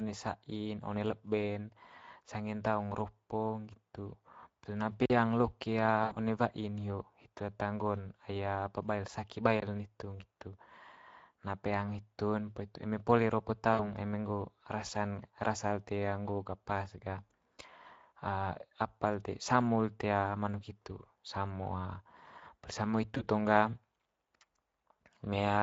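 Speex codec damage runs through all 26 seconds of this speech recording. The sound is plainly hoarse and noisy, which fits a Speex mode around 16.8 kbps where the CELP excitation gets too few bits to carry the natural voice texture. Blocks of digital silence appear at 5.06–5.10 s (about 43 ms) and 9.60–9.62 s (about 21 ms). At each one the signal drops abruptly to silence and returns with no fade. The lengths fit 2048-sample and 1024-sample output buffers that were not filled in time. VoIP packet loss concealed by the speech codec occurs at 6.03–6.16 s (80 ms), 13.73–13.84 s (60 ms) and 23.17–23.24 s (20 ms). There the decoder repeats its last pitch and filter with falling gain, smearing the voice into a fading buzzy tone or coloured noise. The durations fit four, three and one lost 20 ms frames, and the voice stays weak briefly after each gap.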